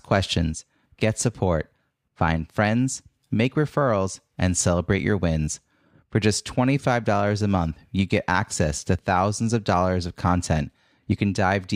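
No technical faults can be heard anywhere in the speech. Nothing in the recording calls for a timestamp or comment.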